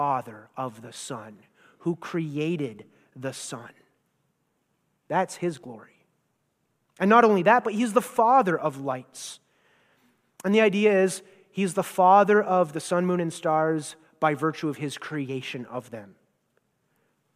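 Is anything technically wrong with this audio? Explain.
No, nothing technically wrong can be heard in this speech recording; the signal stays intact and steady throughout, with no audible defects.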